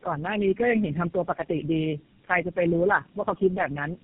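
From start to finish the speech shows tandem speech coding: it sounds as if it crossed several low-rate speech codecs in a row, with a decode and re-encode at each link, ending on what sounds like GSM full rate. Each coder models speech that the previous one had already degraded, so the errors compound. The result is rough, muffled and warbly, and nothing is heard above about 3.8 kHz, which fits a narrowband telephone path.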